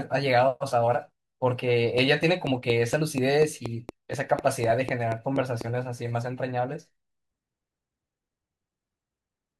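From 1.98 s to 5.62 s, a train of clicks runs over the speech. About fifteen sharp ticks arrive at a steady 4.1 per second. Each one has much the same shape. They are loud, peaking roughly 10 dB above the speech itself. The ticking carries on through the gaps between phrases, so it sits on top of the recording rather than inside it. The likely cause is electrical interference or a faulty connection or power supply injecting a pulse at a fixed rate.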